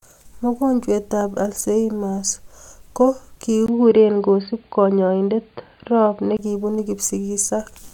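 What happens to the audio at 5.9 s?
At 5.9 s the speech is inside a stretch from 3.66 to 6.39 s that sounds like the input switched to a poorer device. After a brief 20 ms gap, the band stops near 4.7 kHz, giving a dull, boxy tone with faint new background noise at an unchanged level. A likely cause is a change of microphone or headset profile.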